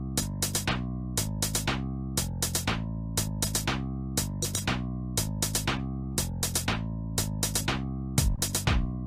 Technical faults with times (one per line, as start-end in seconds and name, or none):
6.11-6.18 short concealed packet loss
8.36-8.39 short concealed packet loss